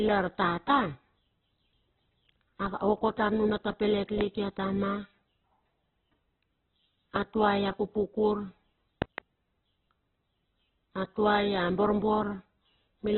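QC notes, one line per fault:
Throughout, Opus compression: speech is grainy and rough, with nothing above 4.1 kHz, giving a narrowband, muffled tone. This is likely Opus in its CELT music mode filling starved bands with noise, which points to a very low bitrate around 8 kbps.
4.21–4.23 s, 7.16–7.18 s and 9.02–9.20 s, loud pop: a sharp pop about 15 dB above the speech, between "tar nuna ta pelet" and "ia tama" at the first, and a double pop at the last, with speech continuing underneath. Likely a voltage step from a plug, switch or static.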